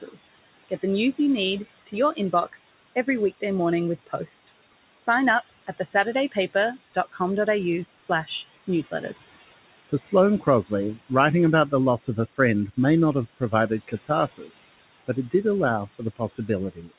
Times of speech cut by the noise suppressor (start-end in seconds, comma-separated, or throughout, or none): 0.02-1.19, 1.87-3.43, 4.07-7.20, 7.95-9.32, 9.88-11.11, 11.70-12.78, 13.40-15.34, 15.87-16.98